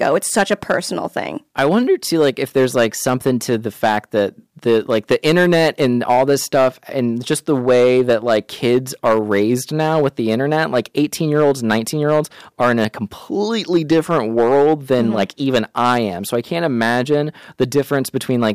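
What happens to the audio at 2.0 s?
Hard clipping is present at 2.0 s, as it is throughout the speech: driven about 8 dB past the limit, the loudest peaks, a small share of samples, are cut flat, adding a gritty crackle on stressed sounds. The abrupt edges set it apart from the rounder fuzz of soft saturation.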